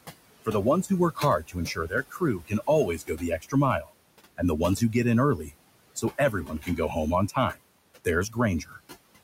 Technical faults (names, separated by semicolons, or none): noise suppressor artifacts; speech cut by the noise suppressor